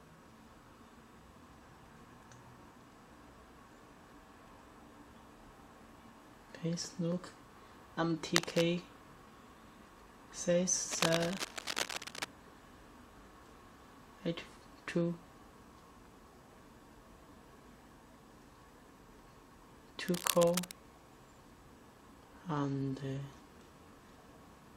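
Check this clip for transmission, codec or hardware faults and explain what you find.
Cable scratch noise appears three times: 8.31 to 8.65 s, slightly louder than the sound itself; 10.91 to 12.25 s; and 20.08 to 20.74 s, both roughly level with the sound. The likely cause is a worn cable, connector or control being moved, which makes its contact resistance fluctuate rapidly. Each event is a burst of dense, irregular scratching and rustling over the audio.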